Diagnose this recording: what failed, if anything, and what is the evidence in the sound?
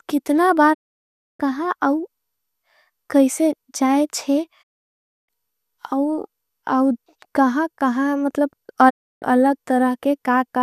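Digital broadcast dropout, at 0.73 to 1.41 s, 4.61 to 5.30 s, and 8.89 to 9.24 s, just after "कहा कहा मतलब". This is a reception-stage failure. The speech fades out over about 20 ms into total silence. It comes back later, so the material in between is gone rather than delayed. The gaps last 0.65, 0.65 and 0.31 s, which suggests a receiver muting whole frames that failed their checks until valid frames resumed.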